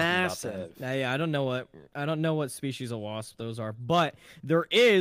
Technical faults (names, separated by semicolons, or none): none